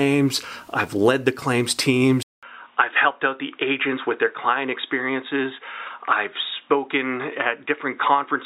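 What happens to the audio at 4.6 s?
At 4.6 s the sound sits inside a stretch from 2.23 s to 8.45 s where it has turned dull and boxy, likely from the input switching to a poorer device. A spectrogram shows everything above 3.8 kHz missing. The waveform shows a 200 ms silent gap at the switch, then a level a few decibels lower over a faint new noise floor.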